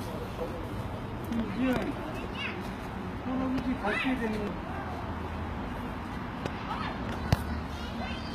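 Everyday sounds run through the whole clip with plainly audible damage: the treble is bright but gritty and metallic, not tied to the lower content, likely from HE-AAC compression at a bitrate around 20 kbps. A spectrogram would show the upper band as repeated, coarsely blocked copies of lower bands.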